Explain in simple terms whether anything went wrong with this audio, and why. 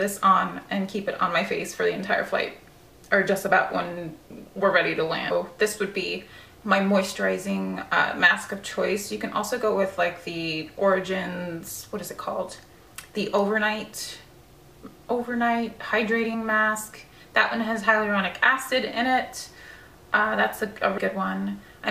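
Compressed frames skipped at 5.30, 16.33 and 20.97 s: missing or rejected chunks of the file were never played, so the audio jumps ahead by about 0.4 s, under a tenth of a second, and about 0.15 s.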